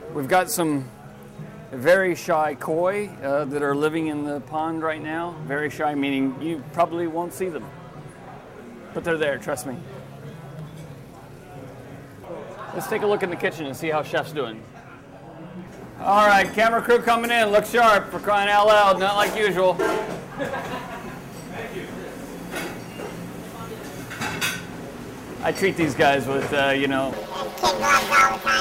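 From 27.13 s to the end, planar audio read as interleaved: 10.67 ms blocks get scrambled into left-right halves, giving a robotic buzz around 93.8 Hz.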